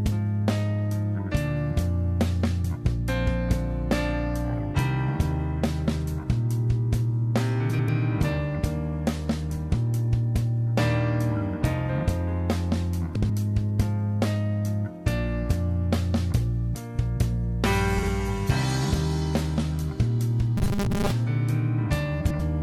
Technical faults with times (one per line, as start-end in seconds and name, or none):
7.69-7.89 frames out of order
13.15-13.30 frames out of order
17.98-18.08 frames out of order
20.57-21.11 robotic sound from repeated short buffers
22.21-22.40 frames out of order